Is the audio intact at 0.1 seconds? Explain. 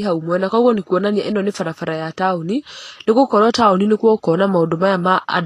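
No. At 0.1 seconds the speech already sounds hissy and grainy, with roughened tones, smeared attacks and nothing above about 14.2 kHz, as it does for the whole clip. This is likely Vorbis compression at a low setting, consistent with roughly 32 kbps: the treble is quantised so coarsely that its fine detail turns into noise-like grain.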